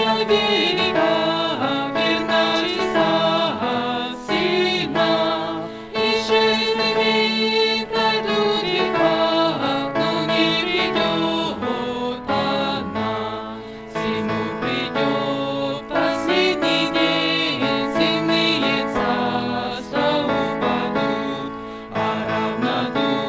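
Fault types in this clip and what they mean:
There are no fault types in this clip; it went through a call link that carries nothing above 8 kHz, and that link is working normally.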